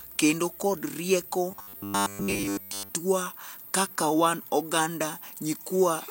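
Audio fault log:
1.51–2.89 s: robotic sound from repeated short buffers. Speech turns into a rigid 100 Hz buzz, likely from a 10 ms chunk repeated through most of it.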